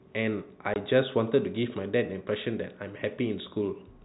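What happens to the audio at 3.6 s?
Nothing goes wrong at 3.6 s: the speech carries on intact through that moment, with only the narrow, telephone-band sound of G.711 coding.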